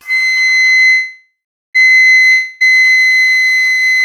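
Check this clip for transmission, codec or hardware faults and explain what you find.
Two transmission faults are audible.

Call audio freeze, 0.91 to 1.77 s: the last sound stretches into a fading buzz, then about 0.41 s of silence, before resuming intact. Likely delayed packets emptied the jitter buffer.

Long network dropout, 2.31 to 2.62 s: the sound decays into a hiss lasting 0.3 s, then resumes with that stretch missing. Likely packets were lost outright.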